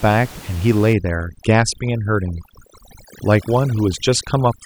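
A short speech recording shows overdone noise removal from 0.93 s through to the end: a heavily set noise reducer pulls bands near its noise estimate down to nothing, leaving near-silent gaps with twinkling specks, despite room noise only about 19 dB below speech.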